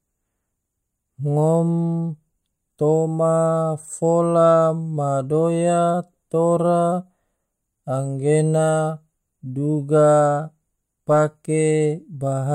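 Listening to this speech recording, nothing stood out as a technical problem.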